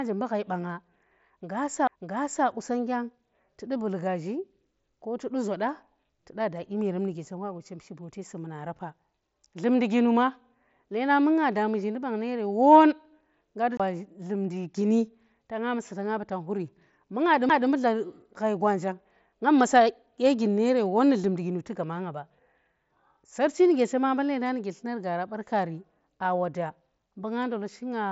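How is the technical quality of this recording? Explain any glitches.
The speech is band-limited, with nothing above about 7.7 kHz and a light graininess on louder syllables, consistent with an mSBC Bluetooth headset path at roughly 61 kbps. Three glitches interrupt it.

CD skip, at 1.87 s, 13.77 to 13.80 s (just after "ngga du"), and 17.49 s: the laser jumps to another turn of the spiral, so playback mutes for about 2, 30 and 7 ms, then resumes elsewhere, heard as a tick and a jump.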